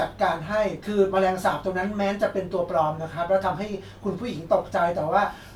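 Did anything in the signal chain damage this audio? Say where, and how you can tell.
No, nothing in the signal chain damaged this audio.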